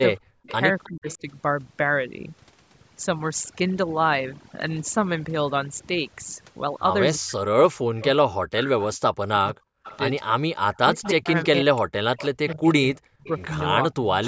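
Right from the start there's overdone noise removal running across the whole clip. The suppressor was pushed too hard, so individual frequency bands get shut off whenever they look like noise, and the quieter bits of speech go with them. The gaps between phrases sit near silence with little twinkling specks. The band tops out around 8 kHz, which is the call's microphone chain.

Between 0.19 and 1.23 s you get speech suppressed in double talk, likely because both ends were talking at once and the echo canceller couldn't tell the near talker from its own loudspeaker echo, so it ducked everything. About a third of a second in total is hit, dropping by something like 40 dB at the worst point, so the speech dips and breaks up in pieces.

Overlapping that, from 0.43 to 1.17 s, there's an echo leak, likely a speakerphone whose canceller let some of the mic pickup through. You hear a faint copy trailing by 318 ms, about 25 dB under the main speech.

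The same double-talk suppression returns from 7.18 to 14.21 s, this time eating around four seconds altogether, again with drops of roughly 40 dB, so long stretches sound chopped and hollowed out.

Inside that stretch the echo leak comes back, a bit stronger at about 20 dB below the speech and still 318 ms late. It appears as short scraps at 8.0–8.06 s and 11.03–11.09 s, a longer smear at 9.5–9.98 s, and a sustained trail from 12.18 to 14.26 s.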